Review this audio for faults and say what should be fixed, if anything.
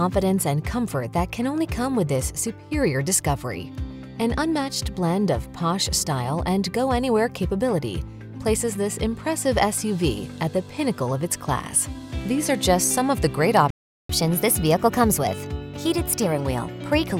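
A playback stall cuts the sound at 13.70 s. The output stays silent for about 390 ms, until 14.09 s. Then the sound resumes. The likely cause is the player running out of buffered data or its audio thread being blocked.

Catch-up at higher speed follows the stall, from 14.09 s to 17.09 s. The player resamples its backlog and plays it at 1.1 times normal speed. The pitch rises by roughly one and a half semitones. At 17.09 s both return to normal.

To prevent both, keep a larger playback buffer and give the audio thread priority so it is never starved or blocked.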